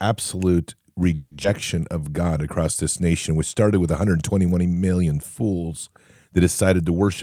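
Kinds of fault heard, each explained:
Call audio freeze: From 1.15 to 1.34 s the speech stalls and the last sound is stretched into a fading buzz for about 160 ms, with a tiny 10 ms silence, likely from delayed packets draining the jitter buffer. It resumes where it stopped, nothing lost, just 160 ms later.
Skip ahead: At 1.43 to 1.47 s the audio jumps forward. Roughly 70 ms of speech is dropped and patched with only a 10 ms fill, so the two sides butt together and the delay shrinks by around 50 ms.
Jitter buffer slow-down: Between 1.76 and 2.05 s the receiver repeats small pitch-period chunks to rebuild its reserve. It adds 51 ms, so the speech runs at 86% speed with unchanged pitch, and sounds come out drawn-out.
Jitter buffer speed-up: From 6.90 s to the end the buffer is over its target, so the receiver trims short pitch-period pieces, roughly 40 ms in total. The speech plays at 110% speed at the same pitch and sounds hurried.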